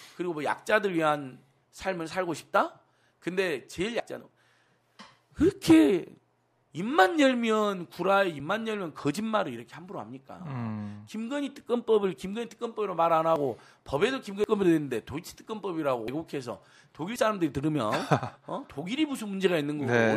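A sudden jump forward in the sound at 4.0, 8.4, 13.36, 14.44, 16.08 and 17.16 s, with no gap, each skipping a few hundredths to about a tenth of a second. These are likely dropped buffers (overrun): samples were overwritten before being read, and the remaining audio was spliced together.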